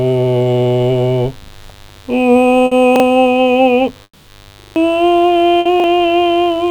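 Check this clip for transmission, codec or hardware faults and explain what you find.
The music carries four kinds of fault: a constant mains buzz, several repeated buffers, two bursts of packet loss and one long dropout.

Mains buzz runs through the whole clip. Unshielded wiring or a switching source near the signal path lets in sharp spikes locked to the 50 Hz mains, twice per cycle, and their harmonics spread well up into the kilohertz range. The result is a steady, raspy buzz sitting about 30 dB below the music.

Repeated buffers occur at 1.44 s, 2.96 s, 4.6 to 4.76 s and 5.8 s. Each time, fresh audio failed to reach the output in time, so the device replayed the piece it already held. The repeats are 40 ms long, which fits a 40 ms buffer. At 1.44, 2.96 and 5.8 s the piece plays twice, giving a quick hiccup with a hard edge. At 4.6 s it plays four extra times, producing a rapid stutter of about 0.16 s, and roughly 150 ms of the music is skipped.

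Bursts of packet loss occur at 2.65 to 2.74 s and 5.59 to 5.68 s. A short run of packets never arrived, so the receiver stretched the last sound for 60 ms and faded it down. The music turns briefly into a smeared, dying buzz or hiss, then jumps ahead with 60 ms of material gone.

A long network dropout occurs from 4.03 to 4.30 s, likely caused by a stall in delivery. The receiver extends the last sound for about 240 ms as a fading held tone, then leaves roughly 50 ms of near silence before the music resumes. The music comes back further along, with about a quarter-second of it missing.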